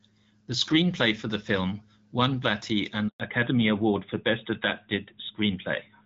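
Speech recorded over a mobile call, with light HD Voice coding artefacts that suggest an AMR-WB link around 12.65 kbit/s. At 3.08 s a handover gap cuts the sound to silence for 120 ms, until 3.20 s, as the call switches networks and no speech frames arrive. From 3.2 s to the end, the call falls back to narrowband: everything above 4 kHz disappears and the speech turns duller and rougher, consistent with a drop from wideband to narrowband AMR at about 12.2 kbit/s.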